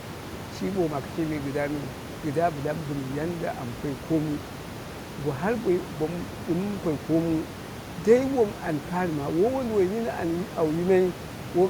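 A speech recording with no technical faults, where the only other sound is the room's own background noise, about 13 dB below the speech and captured along with it.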